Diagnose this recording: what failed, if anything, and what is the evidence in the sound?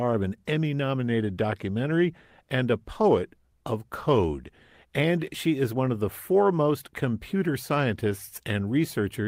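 No fault detected anywhere.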